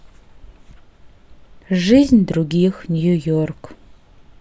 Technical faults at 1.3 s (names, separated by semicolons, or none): none